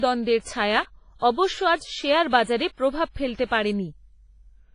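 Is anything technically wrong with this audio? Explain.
Yes. Throughout the speech the sound is washy and ringing, with hiss that swells and fades alongside it, and nothing above 10.5 kHz. This is likely heavy WMA compression at a low bitrate near 24 kbps: long transform blocks smear quantisation noise, and weak components are discarded.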